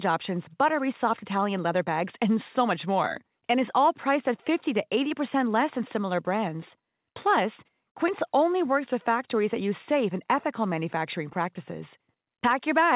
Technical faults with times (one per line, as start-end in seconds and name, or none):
none